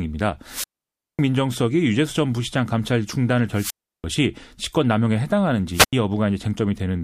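Wireless microphone squelch dropouts occur three times in this speech clip: from 0.44 to 1.22 s, with a muted gap of about 0.55 s; from 3.53 to 4.04 s, muted for about 0.34 s; and from 5.72 to 5.93 s, muted for just 84 ms. Each time the FM radio link weakens, a brief swell of hiss or static comes up, then the receiver's squelch shuts the output to near silence until the signal recovers and the speech returns.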